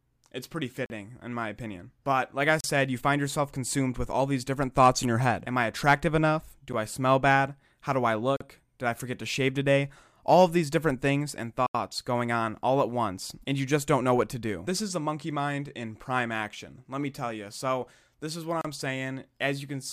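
The speech drops into blocks of digital silence at 0.86, 2.61, 6.73, 8.37, 11.67 and 18.61 s. Most last 31 to 40 ms, one 10 ms, one 80 ms. Samples were zeroed, often from a late buffer. Each cuts abruptly; the 10 ms one is heard as a tick or dip, the rest as short holes.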